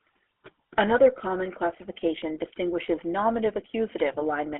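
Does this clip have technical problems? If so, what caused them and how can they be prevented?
Yes. The speech carries GSM full-rate codec damage throughout, plainly audible as a buzzy, gravelly roughness. The pulse-driven vocal-tract model, which fits the 13 kbps full-rate coder, rebuilds the voice from coarse excitation, and the band is confined to roughly 300 Hz to 3.5 kHz. To prevent it, record or route the call over a wideband or full-band codec instead of a legacy GSM full-rate link.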